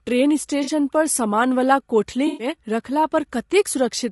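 Throughout the speech, the decoder is reconstructing audio from what is likely low-delay AAC compression (AAC-ELD) at around 32 kbps. Its short frames resolve pitch harmonics poorly, so the voice sounds plainly rough and grainy, with noise filling the gaps between harmonics.

AAC frame loss with concealment interrupts the stream twice, and the decoder fills each gap from the last good spectrum. From 0.63 to 0.70 s, a loss that fits two dropped frames leaves a brief smeared, noisy patch. From 2.27 to 2.47 s, a longer loss consistent with six frames produces a more extended smeared, phasey stretch.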